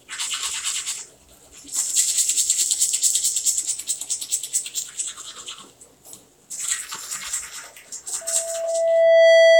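From 8.21 s to the end at 9.59 s, a loudspeaker feedback squeal rises at 661 Hz. The microphone picks up its own loudspeaker until the loop gain passes one. The single tone swells over about a second to roughly 15 dB above the sound, unlike a steady interference hum.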